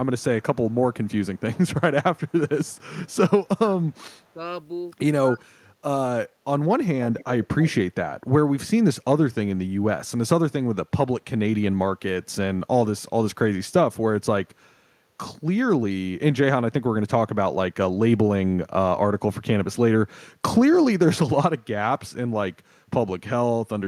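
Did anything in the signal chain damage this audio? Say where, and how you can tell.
Yes, in call processing. Faint echo leak is heard at 0.19–1.41 s, 2.17–3.11 s and 3.92–4.24 s, with the copy trailing by 173 ms. At 7.18–7.72 s it becomes much stronger and lags 256 ms. This is likely far-end loudspeaker pickup that the echo canceller failed to remove.

Speech suppressed in double talk appears at 3.58–3.81 s, 5.22–5.66 s and 6.22–6.87 s. The level dips sharply, by about 15 dB at first and about 30 dB at worst, while the other side is active. The canceller likely attenuated the near-end talker together with the echo.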